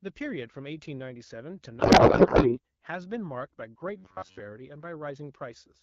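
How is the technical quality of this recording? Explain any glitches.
The recording has two distinct glitches in a speech clip carried over a wideband phone-style codec. Its light coding texture, with the top band above about 6.4 kHz filled in rather than fully detailed, fits AMR-WB running at around 12.65 kbit/s.

From 1.79 to 2.59 s there is a codec payload misread. The speech suddenly gives way to garbled noise and warble that barely tracks the talker. The decoder is reading AMR frames packed in the octet-aligned layout as if they used the bandwidth-efficient layout, so every field lands in the wrong bit position and produces plausible but wrong parameters. Unlike a dropout or plain distortion, the sound keeps coming but stops resembling the speech, then snaps back once the framing lines up.

From 3.97 to 4.40 s the speech turns into robotic sound, a rigid metallic buzz at about 94 Hz that still loosely follows the words. 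The likely cause is playback starved of fresh audio, repeating a buffer of roughly 10.7 ms while most of the real signal, around two-thirds or more, is skipped. The fixed buzz pitch, set by the repeat length rather than the talker, separates this from the misread, which loses the speech contour almost entirely.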